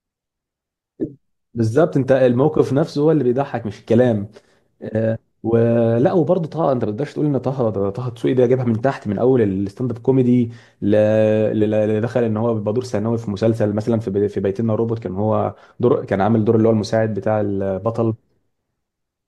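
A corrupt frame decoded at 1.02 to 1.05 s: one damaged compressed frame was played with misread gains, throwing energy to wrong frequencies as a loud glitch, its error peaking around -5 dBFS.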